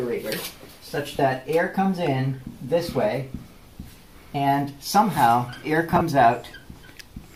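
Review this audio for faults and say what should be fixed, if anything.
Lost LE Audio frames at 1.17 to 1.19 s and again at 5.91 to 6.01 s. At the first point about 20 ms of audio drops out, which fits two 10 ms frames. The LC3 decoder covers the gap by replaying the last spectrum with scrambled signs, so the sound turns briefly into a noisy smear. The second event spreads about 50 ms of loss over 100 ms in short bursts, none much longer than 20 ms. Improving the Bluetooth link's robustness, through closer range, less interference or more retransmission, would prevent these dropouts.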